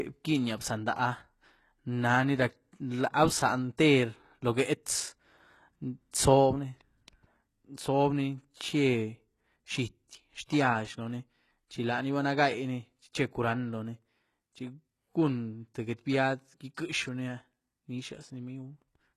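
All the way through, the treble sounds gritty and lispy on s sounds, with nothing above about 12.3 kHz. That's likely HE-AAC compression, which fits a low bitrate of around 16 kbps rebuilding the top end by band replication. Then, at 16.74 to 16.77 s, just after "cun tïë get biad", there's pre-echo: a 27 ms hiss smears in ahead of the attack, because the codec spread its noise across the whole block.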